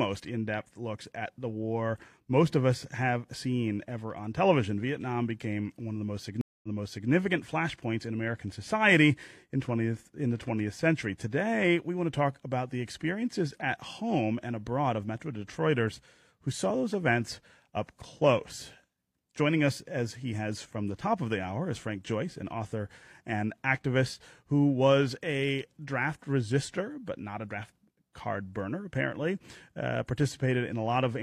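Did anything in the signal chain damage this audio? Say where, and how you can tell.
Yes. There is a stream reconnect at the network stage, 6.41 to 7.10 s. After "one of the most", 0.22 s of silence falls, and the audio then resumes 0.46 s earlier before "flashpoints in". A plain dropout would skip ahead, but this repeats material.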